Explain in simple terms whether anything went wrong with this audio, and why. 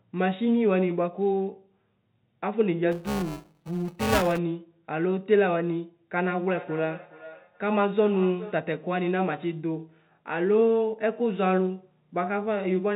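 Two things went wrong. From 2.91 to 4.39 s there is buffer tearing. The part of the system that writes sound into a small looping memory and the part that reads it back out drifted out of step. They now cross each other every cycle, so about a fifth of each chunk is stale sound from a few milliseconds earlier, stitched in with hard edges. The repeating seams make the speech sound robotic, with a steady buzz at about 345 Hz. That rate fits a 128-sample buffer.

From 6.52 to 8.67 s there is feedback echo between two devices. Two devices in the same room were on the call. One played the other's audio out loud, and that second microphone picked it up and sent it round again. Each device's echo cancelling only removes its own playback, so this loop slipped through. You hear each bit of speech come back roughly every 0.4 seconds, fainter than the original, thinner and more ringing on each pass.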